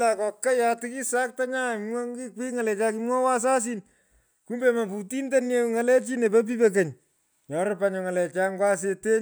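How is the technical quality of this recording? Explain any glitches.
Nothing here trips the ear: the recording runs along without any glitches worth pointing out.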